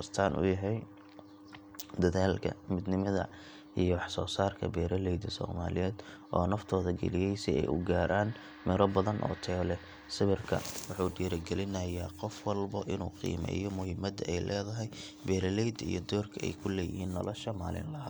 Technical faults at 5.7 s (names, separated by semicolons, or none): none